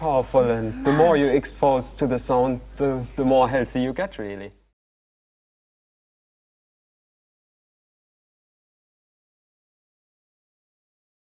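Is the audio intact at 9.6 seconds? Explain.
Yes, the audio is intact at 9.6 seconds, with no fault present at that moment.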